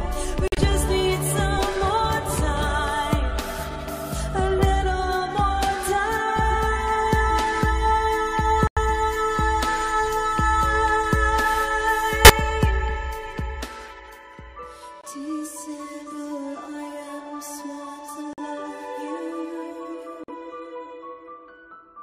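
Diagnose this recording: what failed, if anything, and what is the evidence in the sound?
The codec stage failed: damaged compressed frames were rejected by the decoder and replaced with silence, a corrupt frame muted each time. Abrupt holes open at 0.48–0.59 s, 8.67–8.79 s, 15.01–15.04 s, 18.33–18.39 s and 20.24–20.30 s, with gap lengths consistent with roughly 30 ms frames. Timing holds throughout.

A corrupt frame decoded also occurs in the codec: one damaged frame at 12.25–12.30 s was played instead of rejected, so misread codes and gains scattered energy into wrong frequencies. The result is a brief error peaking at about −5 dBFS.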